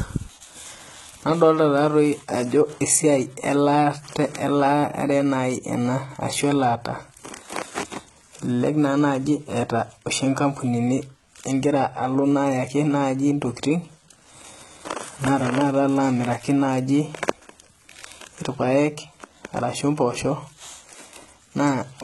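From start to finish the speech carries heavy codec damage, most likely HE-AAC compression at a very low bitrate, around 16 kbps by the sound of it. The treble is not the original but a copy of lower bands shifted upward, so s sounds turn gritty and lispy with a metallic sheen. On a spectrogram the upper band looks smeared and blocky, misaligned with the harmonics below the crossover, and nothing appears above 11.8 kHz.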